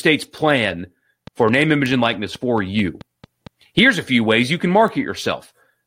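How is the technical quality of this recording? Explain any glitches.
The recording has two kinds of glitch: a run of regular ticking from 1.27 to 3.48 s and two isolated sharp ticks.

From 1.27 to 3.48 s, a train of clicks ticks steadily at about 4.6 per second, around ten in all, each roughly as loud as the speech and audible in pauses too. The similar shapes and even spacing point to a repeating external pulse, likely interference from nearby equipment or a faulty connection or power supply.

At 1.86 s and again at 4.88 s there is a single bright tick, reaching about -11 dBFS and about -17 dBFS respectively. Each is a bit error spike: a flipped bit makes two samples at 1.86 s, and one at 4.88 s, jump by a power of two and snap back, producing a broadband click unrelated to the speech.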